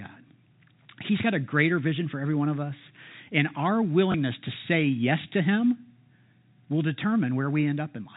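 Speech carried over G.711 telephone coding, with nothing above 4 kHz, has one instance of packet loss with last packet repeated at 4.12–4.14 s, just before "to say yes to". The 20 ms of missing audio, which fits a single lost packet, is filled by replaying the previous one, so it is a small blip rather than a silent dropout.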